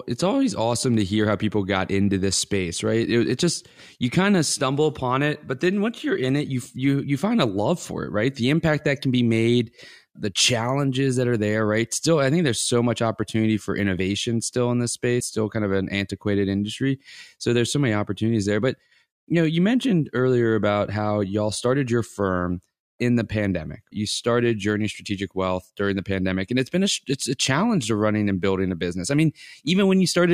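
At 13.98 s, just after "so much opportunity for", compressed frames are skipped. Roughly 20 ms of audio is lost, which fits one frame of about 23 ms. That frame was missing or rejected by the decoder. The speech jumps straight to "still in this space".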